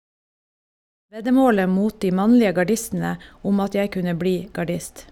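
No technical faults in this speech; the level comes up in a smooth fade-in from around 1 s to 1.48 s, with no click or hard edge.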